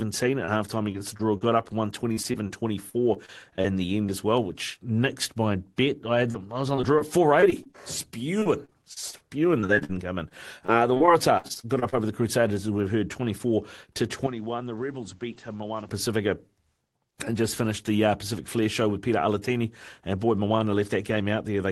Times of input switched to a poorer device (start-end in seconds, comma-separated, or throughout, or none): 14.27-15.89